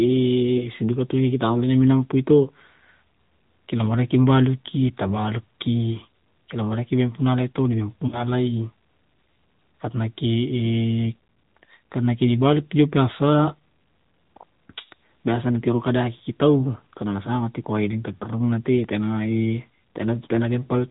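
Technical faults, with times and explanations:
Throughout: AMR narrowband mobile codec. The speech has been through AMR-NB at a bitrate that sounds like about 10.2 kbps, and the damage is plainly audible. Nothing above 4 kHz survives, so sibilants are dull and thin. A vocal-tract model driven by a few pulses per subframe gives the voice a buzzy, synthetic edge. That steady, band-limited character runs through the whole clip, unlike the brief local disruptions listed below.
0.58 s, 8.08–8.24 s, 16.18 s, 18.18 s: lost AMR speech frames. Each time, frames failed their checksum. The decoder filled the gap by repeating the last good pitch and vocal-tract settings at falling gain. Single 20 ms losses at 0.58, 16.18 and 18.18 s give a short dip or warble. The two-frame, 40 ms loss at 8.08 s stretches the sound further and leaves it briefly weak on return. There is no click and no jump, which separates these from a dropped buffer.
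18.84 s: dropped buffer (overrun). A small forward jump in the sound. The likely cause is samples overwritten before the program collected them, with roughly 5 ms of audio missing and the two sides joined directly. Nothing is concealed or faded here. The sound simply skips ahead at a hard seam, which is what tells it apart from the smoothed, drawn-out frame losses just before.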